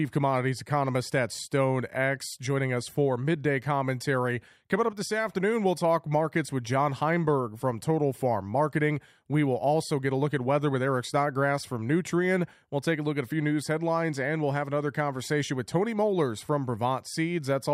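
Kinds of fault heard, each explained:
No kinds of fault are heard in this clip.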